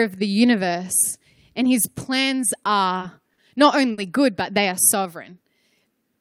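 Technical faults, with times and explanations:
2.99–3.03 s, 3.34–3.40 s and 3.92–4.00 s, short stall from a late packet: the speech freezes for 20, 40 and then 60 ms, just before "good but they are" in the last case, as the receiver holds the last sound until each late packet arrives. Nothing is skipped, which distinguishes this from packet loss. Instead, speech resumes exactly where it paused, arriving slightly later each time.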